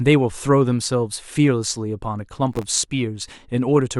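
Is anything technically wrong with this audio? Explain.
Yes. Processor overload crackle runs from 2.53 to 2.79 s: the processor repeatedly misses its deadlines for very short buffers, under a millisecond each, and around fifteen misses replay stale audio with hard edges, producing a gritty, tearing crackle over the speech.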